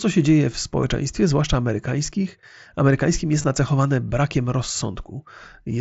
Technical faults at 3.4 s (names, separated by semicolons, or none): concealed Bluetooth headset packet loss